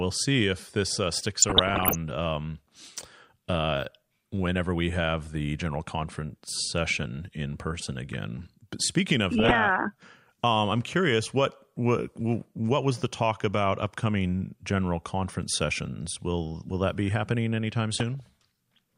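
Speech interrupted three times by DAB burbling: 1.38 to 1.95 s after "see if this uh", 9.39 to 9.55 s after "speaking of", and 17.94 to 18.20 s after "that be happening anytime". Weak reception lets bit errors, under one percent, past error correction, putting noise blips in single sub-bands and making sub-bands jump in level for up to a frame.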